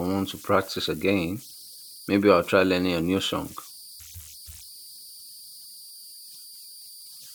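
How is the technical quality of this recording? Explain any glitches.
The recording has one fault, present throughout: converter idle tones. A whistle sits around 5 kHz, and it is clearest in the pauses between phrases. Under the speech the same fault turns into a grainy hiss, at about 22 dB below the speech. The cause is a delta-sigma converter running without dither. When its input is small, its output settles into repeating bit patterns, and those patterns produce steady tones whose pitch follows the input's small offset rather than the speech itself.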